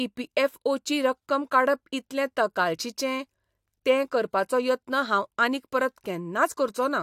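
Nothing in the recording stood out as a technical problem on listening.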